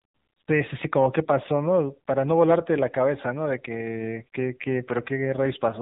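Speech that has passed through the AMR narrowband mobile codec across its whole length, at a bitrate that matches AMR-NB's 7.95 kbps mode, around 8 kbps. The codec works at 8 kHz sampling and rebuilds the voice from a vocal-tract model excited by a handful of pulses per frame, so nothing above 4 kHz survives. The result is a dull, telephone-band sound, with plainly audible buzzy, synthetic coloration from the scarce bits.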